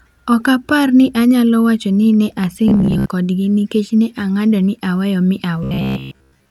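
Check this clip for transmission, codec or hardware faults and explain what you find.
Two bursts of robotic sound from repeated short buffers, at 2.68 to 3.09 s and from 5.63 s to the end. The speech becomes a rigid, metallic buzz near 67 Hz that still loosely tracks the words. The likely cause is audio arriving too seldom, with the receiver looping the last fragment of roughly 15 ms to fill the gap. In the first burst about half the audio is replaced this way, and in the second most of it.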